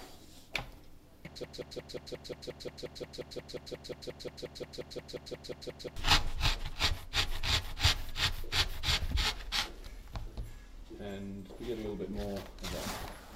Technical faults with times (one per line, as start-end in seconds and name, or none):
1.44-5.96 broken-record loop